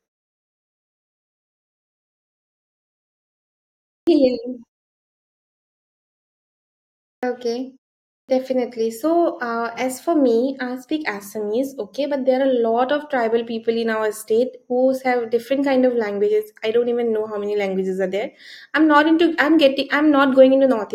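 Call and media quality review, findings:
Clipped start after a pause at 4.03 s, 7.19 s, 8.25 s: onsets truncated by roughly 36 to 42 ms after pauses of 4.03, 2.58, 0.55 s. Output path waking late. Waveform: speech envelope begins abruptly at full level, with no rise.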